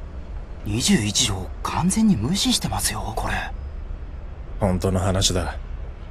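Two free-running clocks likely drifting apart by roughly 40 ppm force single-sample slips, causing clock slip clicks: around ten faint ticks about every 0.7 s, 0.62–5.57 s.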